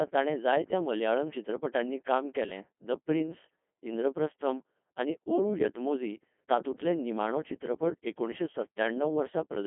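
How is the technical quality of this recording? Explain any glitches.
Poor quality. The whole recording passes through the Codec 2 vocoder, so the speech sounds robotic and buzzy from start to finish. The heavy damage fits a 2.4 kbit/s mode. Only pitch, voicing, energy and envelope survive, the voice is resynthesised from sine waves, and the sound is confined to roughly 200 Hz to 3.4 kHz. On a spectrogram the harmonic stripes stop completely at 3.7 kHz, and the waveform no longer resembles the original.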